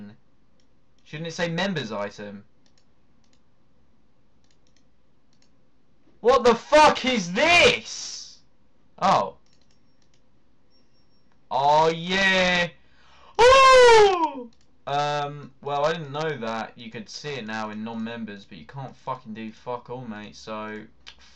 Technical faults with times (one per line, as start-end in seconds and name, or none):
none